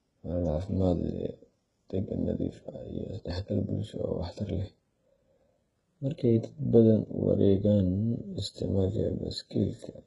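Right through the speech there's heavy damage: nothing above 11 kHz, and the s sounds come out gritty and a bit lispy, with a metallic sheen on the top end. That's likely HE-AAC compression, with treble rebuilt from copied lower bands, which fits a very low bitrate around 12 kbps.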